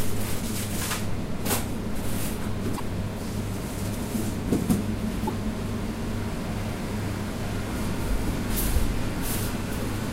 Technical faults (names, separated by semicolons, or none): broken MP3 bit reservoir